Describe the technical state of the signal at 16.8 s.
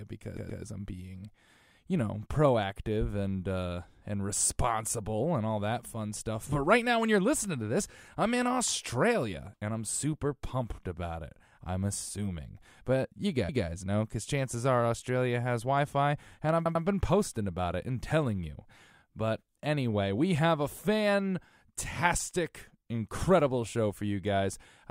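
A stutter from 16.66 to 16.85 s replays a 96 ms stretch of speech twice more: repeated frames, adding 192 ms.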